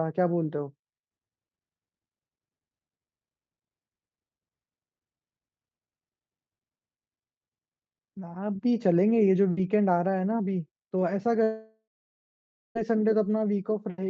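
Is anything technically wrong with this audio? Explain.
Yes. From 11.43 to 12.77 s the speech breaks off in what is likely a long network dropout. About 1.3 s of audio never arrived. The receiver stretched the last sound into a fading buzz, then left near-silence for about 0.9 s. Speech resumes with that stretch missing.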